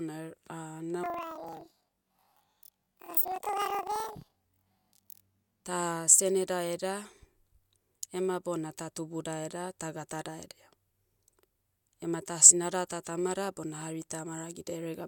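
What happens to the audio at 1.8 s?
At 1.8 s the speech falls inside a stretch of planar audio read as interleaved, from 1.04 to 5.66 s. Each block of about 43 ms, which fits 2048-sample blocks, is read as alternating left-right pairs, so it plays twice at double speed, first its left half and then its right. The voice sounds an octave high with a flutter at about 23 Hz. Unlike a plain speed-up, the overall pace stays normal.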